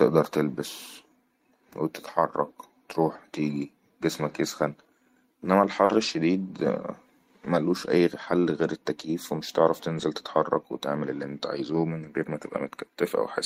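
At 4.27 s a lost packet was rebuilt from error correction: the decoder played a low-bitrate copy carried in the next packet, so there is no gap. The 20 ms frame is just rougher and noisier, visible as a slightly blurred, noise-speckled column on a spectrogram. From 5.85 to 5.91 s comes a short concealed packet loss. About 40 ms never arrived, and the receiver extended the preceding sound before blending back, giving a brief smear or wobble. At 5.89 s, inside that stretch, another packet was rebuilt from error correction. The same rebuilt-from-error-correction roughness recurs at 9.97 s and 12.03 s, each a single 20 ms frame of coarser, noisier texture rather than a dropout.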